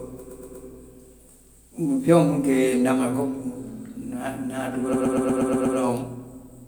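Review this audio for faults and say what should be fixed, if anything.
A run of compressed frames was written out more than once, so the decoder plays the same 120 ms block of speech back to back, a repeated-frames fault. It is heard as a stutter from 0.29 to 0.65 s, where the block plays three extra times, and from 4.93 to 5.77 s, where it plays seven extra times, stretching the speech by 360 ms and 840 ms. To prevent it, make the encoder or transport discard duplicate frames by checking sequence numbers or timestamps before writing.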